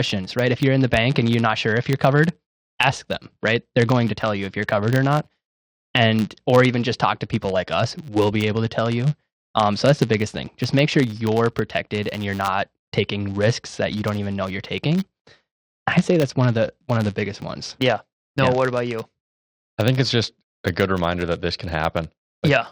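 Throughout the speech, a filter restarted on every block loses its state and begins each roughly 10 ms block from silence, leaving a tiny transient at each boundary. This yields a 100 Hz buzz that swells with the speech, seen as evenly spaced waveform spikes and vertical spectrogram striations.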